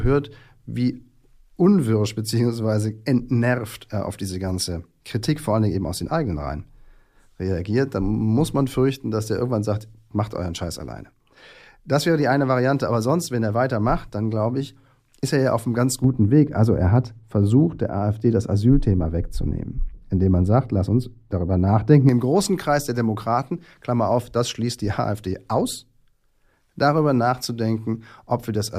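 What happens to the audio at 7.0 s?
Nothing goes wrong at 7.0 s; the audio runs on intact through that moment with no dropout, click or distortion.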